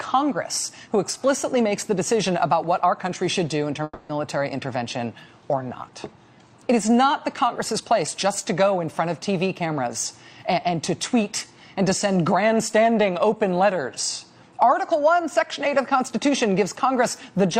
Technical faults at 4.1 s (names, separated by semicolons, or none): long network dropout